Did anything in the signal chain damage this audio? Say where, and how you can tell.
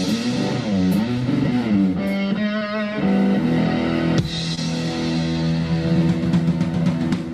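Yes. The damage happened on the network. There are two short concealed packet losses, at 2.59 to 2.63 s and at 4.55 to 4.59 s. In each, about 20 ms of audio arrived too late or not at all. The receiver's decoder covered the gap by extending the last sound it had, for about 15 ms and then 20 ms, before fading back into real audio. You hear each as a brief smear or wobble.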